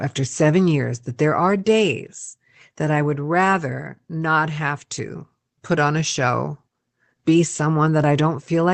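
No technical faults can be heard in this speech. It has passed through a call path as expected, with nothing above 8 kHz and a layer of coding noise that fits a WebRTC link running Opus at around 24 kbps.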